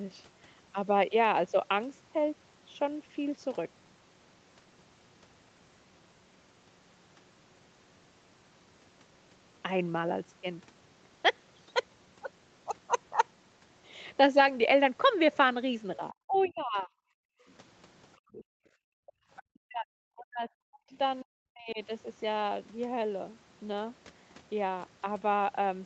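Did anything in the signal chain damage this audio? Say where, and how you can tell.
Yes. Speech suppressed in double talk, in the call processing: from 16.11 to 16.91 s the speech sinks by roughly 30 dB, and from 19.59 to 21.79 s by roughly 40 dB. The likely cause is the echo canceller, which could not separate the near talker from loudspeaker echo during overlap and attenuated both.

The other side's voice leaks through, also from the call processing: a second voice sits roughly 30 dB below the speech at 16.36–16.59 s and 20.90–20.97 s, and roughly 25 dB below from 17.5 to 19.43 s. This is likely loudspeaker echo that the canceller left in the microphone signal.

Background gated by the echo canceller, in the same stage: between 17.19 and 19.31 s the room sound falls away by as much as about 40 dB, for roughly 1.5 s in total, then returns. The canceller clamped the microphone hard while the loudspeaker played and released it afterwards.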